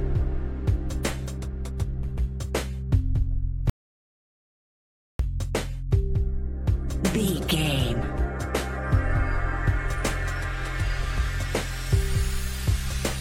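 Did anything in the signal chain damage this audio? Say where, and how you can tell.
Yes, an audio dropout to silence at 3.70 to 5.19 s: dead silence, no room tone, likely the input link dropping while the recorder kept writing.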